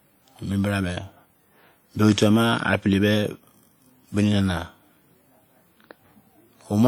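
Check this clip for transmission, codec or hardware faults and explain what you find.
There's one fault, and it runs through the whole clip: what sounds like WMA compression, likely from a low-bitrate transform codec, maybe around 48 kbps. Long transform blocks smear quantisation noise, giving the speech a plainly audible ringing, washy quality with hiss that breathes along with it. Content stops at about 20.1 kHz.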